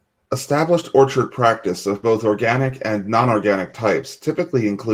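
Nothing here counts as a fault; the speech just carries the light, expected texture of Opus voice coding at around 20 kbps in its hybrid mode, with the full band kept.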